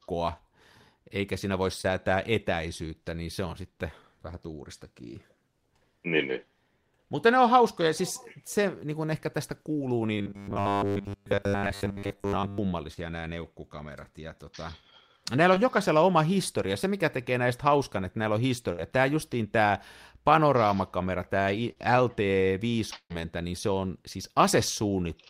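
Short concealed packet loss at 1.81, 9.73 s (after "niin kuin ehkä tästä"), 12.94 s (before "nämä neukkukamerat"), 15.54 and 21.72 s: 20 to 40 ms went missing and was bridged by extrapolation, heard as brief smears or wobbles. From 10.18 to 12.58 s the speech turns into a rigid 100 Hz metallic buzz, likely from a 10 ms buffer being replayed for most of the stretch. Two bursts of packet loss follow. At 18.72 s, after "hauskan että näillä on", about 60 ms is lost and is filled by continuing the last sound, turned down as the gap goes on. At 22.96 s about 140 ms is lost, with half of it silent, before the sound resumes further on.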